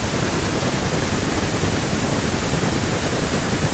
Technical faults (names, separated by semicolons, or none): none